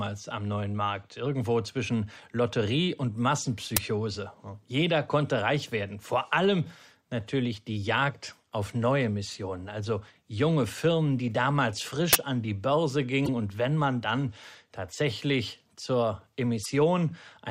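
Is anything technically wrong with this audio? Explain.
Yes. An uninitialised buffer is heard at 3.77 s and again from 12.13 to 12.15 s, between "die damals" and "an die". Each time a block was played before any audio was written into it, so stale memory came out as samples: short, loud disturbances. The bursts last about 5 ms and 21 ms, which fits 256-sample and 1024-sample buffers.

Damaged data in a compressed stream occurs from 13.24 to 13.29 s and from 16.62 to 16.66 s, right after "man dann tatsächlich zur". Corrupted bytes made the decoder misread frames and lose sync while it hunted for the next valid header, producing brief glitches.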